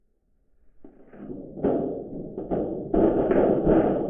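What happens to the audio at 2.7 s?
Nothing goes wrong at 2.7 s; the sound continues intact through that moment, with no dropout, click, glitch or other audible fault.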